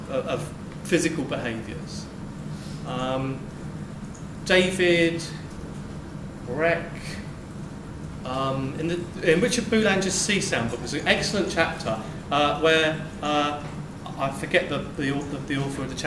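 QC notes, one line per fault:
Nothing to flag here; the whole clip sounds fine with no problems to note.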